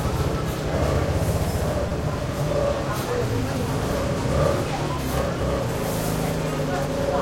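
At 1.89 to 1.91 s there is a repeated buffer. Fresh audio arrived late, so the device replayed its last block four more times. Each block is very short, which fits a 5 ms buffer. The result is a brief buzz with hard joins, and almost nothing is lost.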